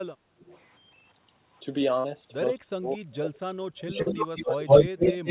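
Right at the start, from 0.39 to 0.6 s, there's a faint echo leak: a copy of the speech trailing about 222 ms behind, well down in level, likely the far end's loudspeaker bleeding past its echo canceller.

At 2.0 s, and again at 4.02 s, you get a short concealed packet loss. About 40 ms went missing and the receiver papered over it by stretching the last bit of sound, so it comes across as a quick smear or wobble.

From 2.6 s to 5.02 s the speech gets squashed in patches adding up to about a second and a half, dropping by something like 35 dB at worst. That's speech suppressed in double talk, likely the canceller ducking everything while both sides overlap.

Then from 3.79 s to the end the echo leak comes back much harder. This time it's about 166 ms late and roughly as loud as the speech itself, even a touch louder, all within the narrow 4 kHz band of the G.711 line.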